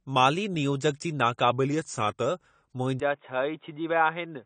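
Speech whose whole length has nothing above 9 kHz, yet carries the smeared, swirly artefacts of a low-bitrate encode. That points to low-bitrate audio saved at a high bitrate: the MP3 at 256 kbit/s likely wraps a much thinner earlier encode, about AAC at 32 kbit/s. A plain low-pass would leave no such artefacts. From 1.51 to 2.26 s the sound slows by 5.2% and drops about 93 cents, close to a semitone, then snaps back. This is likely a drift correction step. It is one fixed shift and return, unlike the constant wavering of wow. At 3.00 s, with no gap, the band abruptly narrows to nothing above 3.8 kHz. The level falls by about 5 dB and a new noise floor sits roughly 45 dB below the signal. The input was likely switched to a poorer device. The sudden change of tone and noise together sets it apart from a codec limit.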